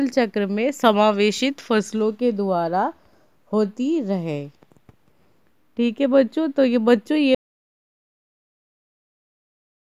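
At 7.35 s the sound cuts out mid-flow and never returns: an audio dropout to silence lasting about 2.5 s to the end. It's silent with no room tone, so the input was likely lost while recording carried on.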